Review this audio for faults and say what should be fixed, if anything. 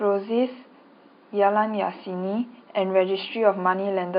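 Nothing here needs fixing; no faults can be heard.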